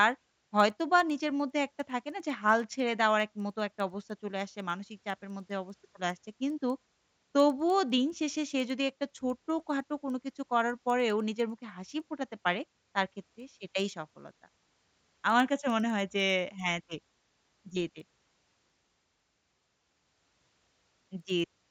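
Throughout, a resampler restarted on every block converts 16 kHz to 48 kHz in 100 ms pieces. Each edge errs, giving 10 Hz ticks during speech.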